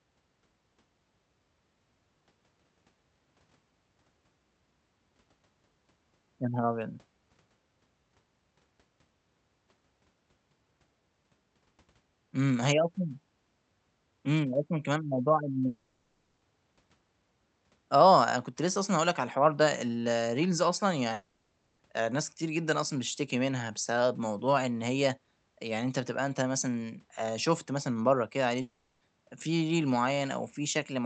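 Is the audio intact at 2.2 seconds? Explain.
Yes, the speech at 2.2 seconds is intact, with no dropout, glitch or other fault at that moment.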